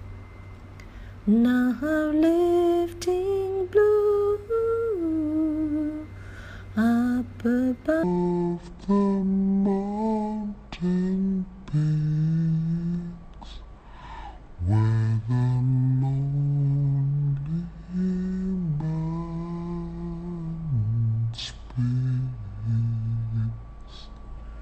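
A section at the wrong speed runs from 8.03 s to the end of the clip at 24.62 s, where the audio abruptly slows to 0.55 times its original rate. Because speed and pitch are tied together, everything in that stretch drops about ten semitones, close to an octave, and sounds deep, heavy and dragged out. This is likely caused by an editor or player applying the wrong clock to that portion.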